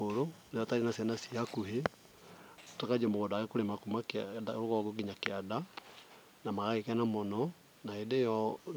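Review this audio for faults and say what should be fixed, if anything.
Nothing here needs fixing; no faults are audible.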